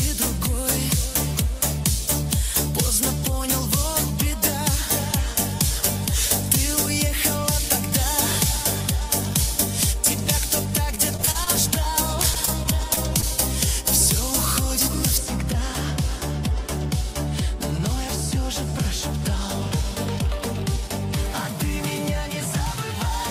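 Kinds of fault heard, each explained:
Pre-emphasis left on: from 0 to 15.18 s, treble boosted without the matching cut, about 14 dB at 10 kHz, fitting the 75-microsecond FM curve, making it bright and sibilant.
Repeated packet loss (robotic sound): at 10.95 to 11.78 s and 12.22 to 13.24 s, seven gaps each, patched by continuing the last sound, giving choppy, robotic stretches.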